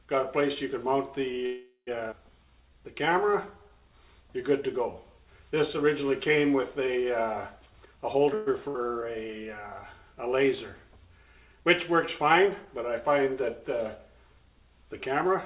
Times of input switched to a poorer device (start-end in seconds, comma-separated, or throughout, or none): none